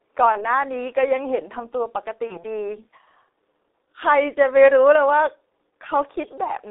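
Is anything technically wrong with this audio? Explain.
Yes. The whole clip carries the G.723.1 codec: around 6.3 kbit/s speech squeezed into a 300 Hz to 3.7 kHz telephone band, coded in 30 ms frames with a slowly updated voice model. Damage is heavy, so the speech sounds muffled and hoarse, with smeared consonants.

VoIP packet loss concealed by the speech codec occurs at 0.32–0.46 s and 2.28–2.45 s, each a single 30 ms frame lost. The decoder repeats its last pitch and filter at falling gain, giving a brief buzzy tone or coloured noise that fades, whose disturbance outlasts the gap.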